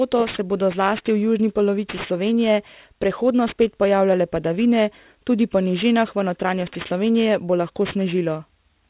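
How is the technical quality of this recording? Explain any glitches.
The quality is compromised by one fault that lasts the whole recording. Aliasing runs from start to end. Nothing above 4 kHz was filtered out before the rate dropped, which fits a conversion to 8 kHz, so that content folds back as unrelated tones roughly 20 dB below the speech. Sibilants sound gritty and metallic. A spectrogram shows energy jammed against a 4 kHz ceiling, with mirrored streaks below it.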